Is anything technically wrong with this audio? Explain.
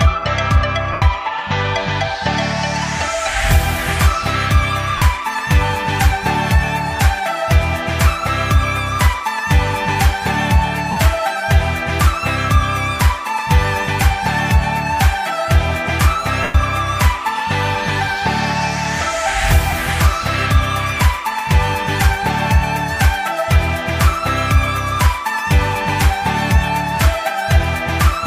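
Yes. There are lost LE Audio frames at 0.93 s (90 ms), 4.98 s (about 38 ms), 10.92 s (45 ms), 16.43 s (about 113 ms) and 19.70 s (about 23 ms). The LC3 decoder conceals each gap by repeating the last spectrum with randomised phase signs, so tones smear into noise. The longer gaps at 0.93 s and 16.43 s fade toward silence.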